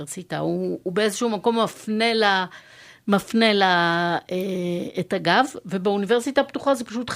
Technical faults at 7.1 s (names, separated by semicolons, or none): none